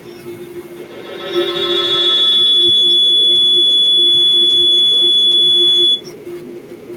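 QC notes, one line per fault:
0.76–6.11 s, feedback howl: a second device in the same room on the same call feeds the loudspeaker back into the microphone, and each trip round that loop comes back louder instead of dying away. The repeats narrow to a shrill tone of around 3 kHz, the pitch the loop favours, pulsing roughly every 150 ms at the loop's delay. It peaks at about 15 dB above the speech and holds until the loop breaks at 6.11 s.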